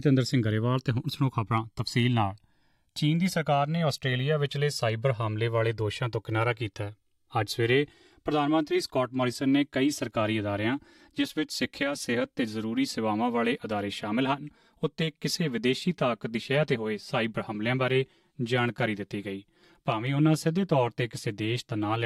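Channels drifting apart runs through the whole clip: the left and right sides were captured on separately clocked devices, mismatched by around 300 ppm, so their offset grows to roughly 7 ms by the end. Summed to mono, sweeping comb notches produce a slow flanging.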